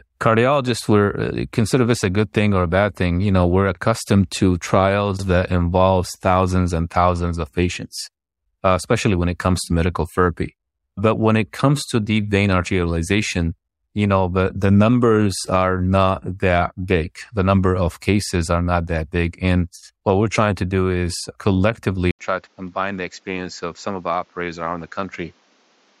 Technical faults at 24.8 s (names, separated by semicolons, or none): input switched to a poorer device